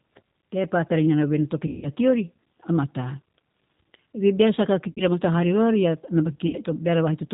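Throughout the speech, the G.729 codec is plainly audible. The band stops at 4 kHz, and the timbre has the slightly rough, synthetic quality of a coder that rebuilds each 10 ms frame from a vocal tract filter, a pitch predictor and a handful of pulses. That coarse description of the waveform fits an 8 kbit/s rate. The result stays intelligible, but the fine texture of the voice is replaced by a reconstructed approximation.

VoIP packet loss concealed by the speech codec occurs three times. From 1.67 to 1.88 s, about 160 ms of audio is missing. The decoder repeats its last pitch and filter settings at falling gain, so the sound smears into a buzzy tone or coloured noise that fades, and the voice stays weak briefly after audio resumes because each frame builds on the damaged one before it. Shorter gaps of about 60 ms each, at 4.91 to 5.02 s and 6.47 to 6.56 s, produce the same stretched, fading sound at smaller scale.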